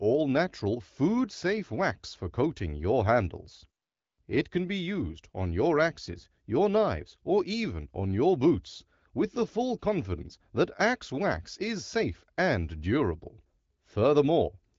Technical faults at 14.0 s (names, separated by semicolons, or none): none